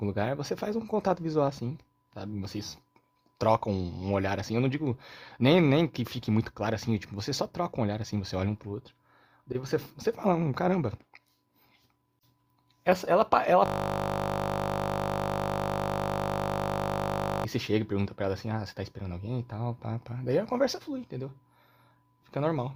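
From 13.66 to 17.45 s the speech gives way to a steady buzz at 50 Hz. This is a system hang loop: the system froze while the audio hardware kept replaying one 20 ms slice, which fits a 20 ms ring buffer, repeating it 189 times.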